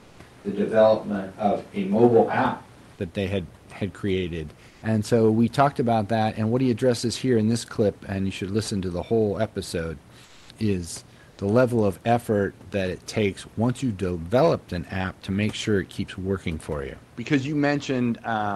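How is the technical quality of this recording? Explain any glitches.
Two things stand out: a stretch at the very start that sounds like it's on a different microphone, and a few short pauses where the background goes oddly flat.

Switch to a distant microphone, 0 to 2.99 s: the audio opens roomy and hollow, thinner in the bass, then snaps to a closer sound. The close mic's feed was likely dropped in favour of one further off. Oddly, there's no real level jump, and the room noise stays well down.

Comfort noise in place of the background at 4.68 to 4.82 s (140 ms, after "they had had created"), 10.24 to 10.49 s (250 ms, between "to the whole episode" and "is the level of"), and 11.30 to 11.38 s (80 ms, between "the whole episode is" and "the level of effort"). In these gaps the real room tone gets swapped for a smooth, featureless hiss, about 2 to 3 dB quieter. That's likely discontinuous transmission, pointing to Opus DTX, where the receiver synthesises filler noise while the sender goes quiet. 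The call path's top end rolls off, fitting a band limit around 12 kHz.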